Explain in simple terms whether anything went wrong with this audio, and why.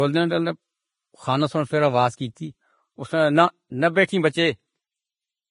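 Throughout the speech, the sound is hissy and grainy, with a rough, fizzy edge on the higher sounds and softened, smeared starts to consonants. Nothing comes through above about 10.6 kHz, so the top sparkle is gone. The likely cause is heavy Vorbis compression: to save space, the encoder removed the highest frequencies and stored the remaining treble so crudely that its fine detail turned into noise of similar loudness.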